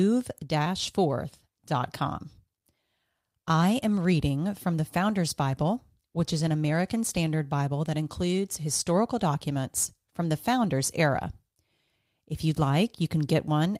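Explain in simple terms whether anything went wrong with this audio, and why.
Nothing in this speech recording stood out as going wrong when listening to it.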